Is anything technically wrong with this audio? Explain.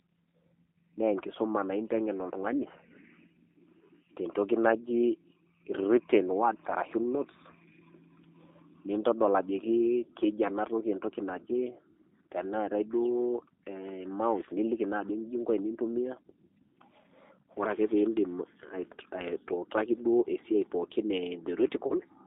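Yes. G.729 codec damage runs through the whole speech clip. The speech is rebuilt from a vocal tract filter, a pitch predictor and a few pulses per short frame, so it comes out slightly rough and synthetic, with plainly audible coding artefacts. The sound is confined to roughly 300 Hz to 3.6 kHz, a thin telephone band. This is consistent with the 8 kbit/s G.729A coder.

VoIP packet loss concealed by the speech codec occurs from 21.87 to 21.95 s, near the end. About 30 ms of audio went missing, which fits a single lost packet. The decoder filled the gap by extending its last pitch and filter with falling gain, so the speech briefly turns into a buzzy tone or coloured noise that fades. Because each frame depends on the one before, the voice stays weak or distorted for tens of milliseconds past the gap.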